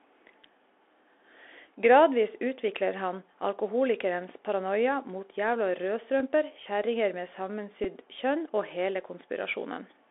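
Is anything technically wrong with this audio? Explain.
Yes. The speech is affected by two faults, one present throughout and one occurring twice.

The Bluetooth CVSD headset codec colours the whole clip. The band is limited to roughly 300 Hz to 3.5 kHz, which fits the 64 kbps one-bit delta coding used on headset links. Each sample only steps up or down, with an adapting step size, so fast, loud high-frequency content outruns the step and distorts. The damage is plainly audible: s sounds turn scratchy, the top end is missing, and a granular hiss sits under the speech.

A Bluetooth headset packet repeat occurs at 6.20 s and again at 7.84 s. Each lasts about 7.5 ms, which fits two lost voice packets. When audio between headset and phone fails to arrive, the decoder replays the previous packet's bits. With repeats spaced 3.75 ms apart, a run like this becomes a buzz near 267 Hz. Here each run is brief, so it sounds like a short buzz in the speech until good packets return.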